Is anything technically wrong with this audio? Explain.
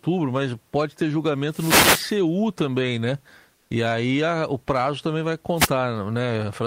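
Yes, there are two kinds of problem in this speech clip.

The first is a wireless microphone noise hit, and it happens twice. From 1.48 to 2.18 s, right after "mas pode ter" and before "também né", there's a burst of static. A shorter swish follows at 5.56 to 5.70 s, just after "o prazo também vai". The analogue FM radio link faded as reflected signals cancelled each other out, so the receiver's own hiss rose up through the audio.

The second is comfort noise in place of the background, from 3.55 to 3.69 s, just after "também né". For about 140 ms, the real room noise (sitting about 42 dB under the speech) gets swapped for a flat, featureless hiss at the same level. The likely cause is Opus DTX. The sender stops transmitting during the pause, and the receiver fills the gap with synthetic noise, so the texture changes without any drop in level.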